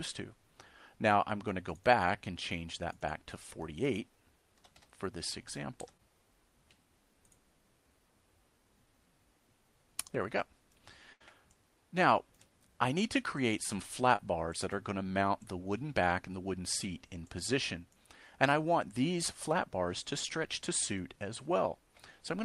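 A call recording with a few network dropouts. At 5.97–6.01 s and again at 14.16–14.20 s there's short concealed packet loss: roughly 20 ms of audio didn't arrive in time, so the decoder stretched the previous sound to cover the hole and blended back, leaving a quick smear or wobble. The bigger one is a burst of packet loss at 11.13–11.22 s. About 80 ms went missing, which fits a run of several lost packets. The receiver papered over roughly 75 ms of it by extending and fading the last sound before the real audio picks up again further along, so that stretch is simply gone.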